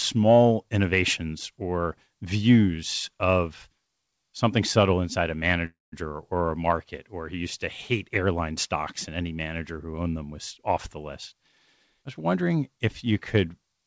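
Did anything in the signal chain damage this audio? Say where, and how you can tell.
Yes. Between 5.66 and 5.94 s the audio freezes, likely from packets held up on the network so the jitter buffer ran dry. A spectrogram shows the last sound smeared into a fading buzz or hiss, then about 180 ms of blank. The audio resumes where it stopped, nothing lost but 263 ms later.

From 11.94 to 12.57 s there is a jitter buffer speed-up: the sound runs at 109% speed with unchanged pitch, so harmonic spacing holds steady on the spectrogram. In the waveform, roughly 70 ms of pitch-period slices are trimmed away. Throughout, the spectrum stops at 8 kHz, consistent with the G.722 call codec.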